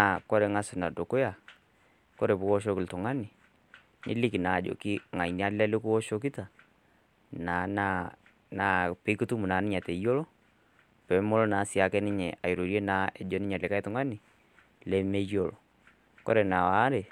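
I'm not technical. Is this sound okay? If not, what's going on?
Yes, it sounds fine, with nothing here that needs fixing.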